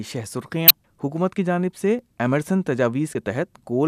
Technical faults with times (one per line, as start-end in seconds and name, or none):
0.67-0.71 damaged data in a compressed stream
3.12-3.15 damaged data in a compressed stream